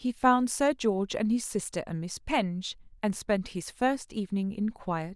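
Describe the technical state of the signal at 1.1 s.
At 1.1 s the speech signal is intact, with no fault present at that moment.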